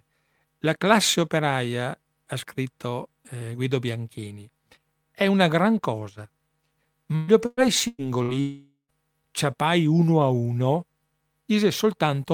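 From 7.15 to 8.31 s the speech turns choppy and robotic: repeated packet loss leaves four holes, the longest 122 ms, each patched by stretching the previous sound, so about 35% of the span is concealed. A spectrogram shows smeared, repeating harmonic bands where detail should change.

Then, from 8.40 to 8.92 s, the audio buzzes or hisses, fades, and sits about 130 ms in silence before returning at "ciapai uno a uno", likely a long network dropout. The waveform shows a decaying tail into a flat gap.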